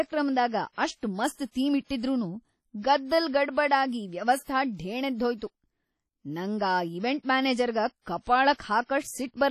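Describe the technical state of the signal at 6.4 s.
At 6.4 s, as across the whole speech clip, a low-bitrate transform codec, likely WMA compression at around 32 kbps, spreads quantisation noise over long blocks and zeroes weak components. The result is heavy ringing and washy smearing, hiss that breathes with the signal, and nothing above 17.4 kHz.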